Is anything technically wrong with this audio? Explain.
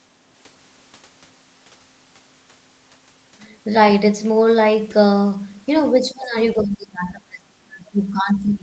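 Yes, there's speech suppressed in double talk. At 5.94–6.37 s the speech drops by about 20 dB, and from 6.54 s to the end it sinks deeper, around 30 dB, most likely an echo canceller ducking the talker while the far end spoke.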